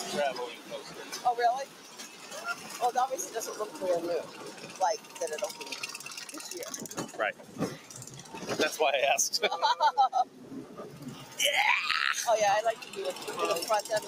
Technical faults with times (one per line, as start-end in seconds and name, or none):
0.00-14.07 noise suppressor applied to music or sounds
0.55-1.19 sound cut by the noise suppressor
1.65-2.71 sound cut by the noise suppressor
4.26-5.20 sound cut by the noise suppressor
6.09-6.40 sound cut by the noise suppressor
7.33-7.92 sound cut by the noise suppressor
10.25-10.77 sound cut by the noise suppressor
11.22-11.38 sound cut by the noise suppressor